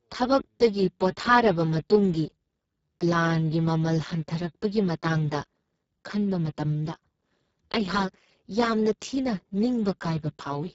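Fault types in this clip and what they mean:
Speex codec: the speech was encoded with the Speex CELP codec at a very low quality setting, with damage that sounds like a bitrate near 6 kbps, leaving too few bits to code the excitation properly. The speech throughout sounds heavily degraded: noisy, hoarse and edging toward a robotic, vocoder-like buzz. The upper band is a thin, noise-like fill rather than real detail, and nothing is present above 7.6 kHz.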